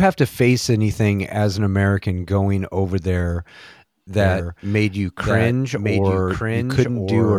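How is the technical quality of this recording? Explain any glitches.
There's one real problem: a doubled audio track from 4.21 s to the end. A second full-band copy of the speech, a few dB quieter, trails about a second behind and cuts in abruptly with no room colour, likely from a slower capture path recording it twice.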